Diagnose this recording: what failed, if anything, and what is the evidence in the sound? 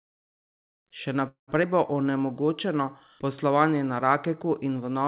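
Call audio freeze, 1.28 to 1.51 s, at the network and jitter buffer stage. The sound stops moving and the last fragment is carried on for about 196 ms as a fading buzz that sinks to silence for roughly 130 ms before the speech resumes where it left off, with nothing lost. This is likely a late burst of packets that drained the jitter buffer, so the receiver concealed the gap and inserted roughly 196 ms of extra delay.

Skip ahead, 1.63 to 1.66 s, also at the jitter buffer. Almost immediately after the freeze, playback jumps forward with only a 6 ms joint, and about 70 ms of speech is gone, with the two sides butted nearly together. Having built up a surplus of queued audio from the freeze, the buffer discarded a short stretch to cut back around 50 ms of the added delay.

Jitter buffer slow-down, 1.68 to 2.12 s, in the buffer's time-stretching. Over these 0.44 s the speech plays at 90% speed with unchanged pitch, so sounds are drawn out. 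The receiver repeated individual pitch periods to add 53 ms and rebuild its reserve after the skip. Throughout, the band stops at 4 kHz, as expected for the G.711 mu-law call path.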